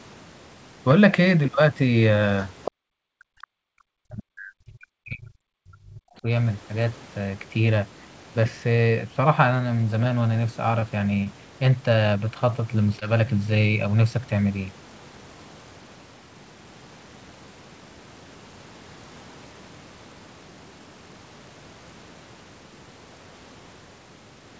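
Right at 2.65 to 2.71 s a faint second voice slips in, sitting about 10 dB under the talker. That's likely the other side's voice leaking through, where the far end's loudspeaker playback got past the echo canceller and back into the mic.

Straight after, from 2.71 to 2.8 s, the room sound just drops away for roughly a tenth of a second, falling by about 40 dB. That's background gated by the echo canceller: it slammed the mic down while the loudspeaker was active, then let go.

From 3.08 to 6.26 s the talker keeps dipping and breaking up for about three seconds, with drops of around 40 dB. That's likely speech suppressed in double talk. Both sides were talking at once, and the canceller couldn't separate its own talker from the echo, so it pulled everything down.

Two short stalls from a late packet come next, at 10.80 to 10.84 s and 11.24 to 11.28 s. In each, the sound is held for an extra 18 to 20 ms while the jitter buffer waits, which gives a tiny hang with a slight buzz or dip, but nothing goes missing.

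At 13.00 to 13.03 s there's a short concealed packet loss. About 20 ms of audio never arrived, and the receiver papered over it with 14 ms of extrapolated sound, so you get a quick smear or wobble there.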